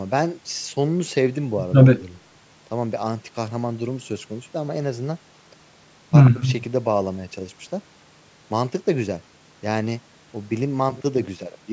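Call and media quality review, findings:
No faults found in this speech clip. The call microphone processing is audible as a normal band limit, with the lowest bass trimmed and nothing above 8 kHz.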